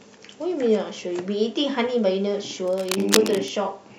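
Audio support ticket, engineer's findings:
Cable scratch noise, 2.67–3.49 s: dense, uneven scratching just below speech level. Likely a worn cable or connector shifting, so contact resistance fluctuates. Irregular rustle, unlike isolated clicks or steady hiss.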